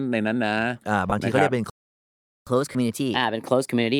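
Lost LE Audio frames appear first at 1.10 to 1.12 s, a 20 ms gap in the speech, which fits two missing 10 ms frames. The LC3 decoder fills the hole by repeating the last received spectrum with randomised signs. Over so short a span the concealment never fades, so the speech briefly turns into a grainy, noisy smear instead of dropping out.

A playback stall follows at 1.70 s. The output falls completely silent for about 767 ms, until 2.47 s, cutting the speech off mid-flow. The sound most likely stops because the player's buffer ran dry or its output thread was blocked, leaving nothing to send to the output until it recovered.

Catch-up at higher speed begins the moment sound returns at 2.47 s and continues to the end of the clip. The player resamples its backlog to run at 1.15 times normal speed, so the speech sounds hurried and raised in pitch by about two semitones as it wins back the time lost in the silence.

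Lost LE Audio frames recur inside that sped-up stretch, at 2.72 to 2.75 s. This 30 ms gap is consistent with three dropped frames, and the decoder again patches it with a sign-scrambled copy of the last spectrum, giving a second, slightly longer noisy smear over the hurried speech.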